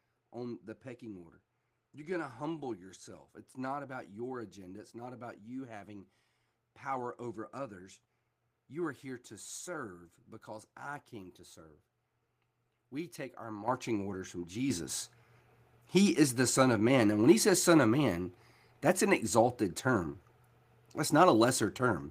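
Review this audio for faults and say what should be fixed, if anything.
Microphone volume stepped up at 13.68 s (about 9 dB) and 14.7 s (about 7 dB). The input gain jumped in single steps, lifting background noise along with speech, unlike a talker moving closer. Turning off automatic microphone gain adjustment in the call software would prevent it.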